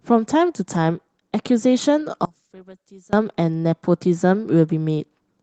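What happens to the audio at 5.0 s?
Nothing goes wrong at 5.0 s: the speech carries on intact, with only the light, steady coloring of the Opus voice compression running through it.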